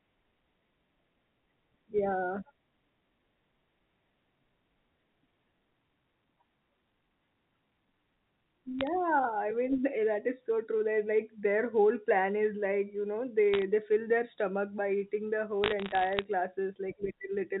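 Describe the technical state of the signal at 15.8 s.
At 15.8 s you're in a burst of bit errors on a digital phone line, running 15.64 to 16.24 s. Scattered flipped bits each corrupt single samples, putting sharp ticks and crackle over the speech.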